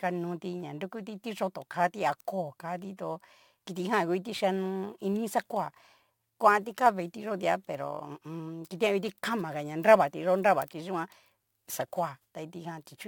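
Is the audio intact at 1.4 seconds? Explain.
No, 1.4 s falls within crude rate conversion that runs through the whole speech clip. Samples are simply repeated, in a pattern that fits a 44.1 kHz to 48 kHz conversion, leaving an inharmonic fizz roughly 25 dB below the speech. Unlike steady hiss, it rises and falls with loud, bright sounds.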